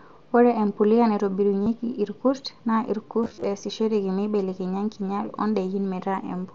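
At 1.64 to 1.66 s there's a short bit of concealed Bluetooth headset packet loss: about 30 ms of audio never arrived from the headset, and the phone papered over it by repeating the best-matching slice of the last 20 ms or so. From 3.23 to 3.44 s it happens again in scattered bursts, about 128 ms lost over roughly 210 ms, no gap longer than 30 ms. Those repeats give a brief buzzy, held tone with a slight warble as real sound returns, all over the light graininess of the mSBC headset link.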